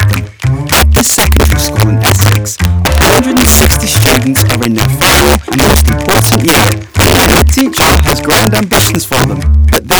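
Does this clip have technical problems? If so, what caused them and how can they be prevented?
Yes. Integer overflow runs throughout: the signal is driven about 11 dB too hot, and a few percent of samples exceed the integer limit and wrap to the opposite sign, producing violent cracks on loud peaks, far harsher than clipping's flattened buzz. Prevent it with saturating arithmetic or proper gain staging.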